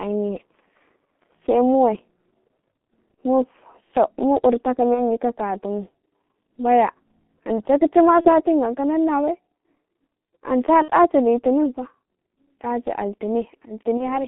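Speech, carried through the G.723.1 codec for its whole length. The band runs only from 200 Hz to 3.5 kHz, so the voice sounds narrow and muffled. The damage is heavy, and it points to the 6.3 kbit/s mode. The coder works in 30 ms frames and adapts its voice model slowly. That leaves a hoarse, rough texture, and consonants smear into one another. VoIP packet loss concealed by the speech codec breaks in five times. The breaks fall at 3.14 to 3.17 s, at 4.94 to 5.19 s just before "ka katu mu", at 8.21 to 8.30 s, at 10.82 to 10.90 s, and at 13.97 to 14.27 s. Four gaps fit one lost 30 ms frame. The one at 10.82 s fits two frames, about 60 ms. In each gap the decoder repeats its last pitch and filter with falling gain. The sound stretches into a fading buzz or coloured noise. Each frame leans on the one before, so the voice stays weak or distorted after the loss. That is why most disturbances outlast the missing audio.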